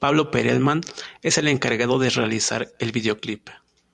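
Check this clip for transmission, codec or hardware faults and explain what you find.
Nothing faulty can be heard anywhere in this speech.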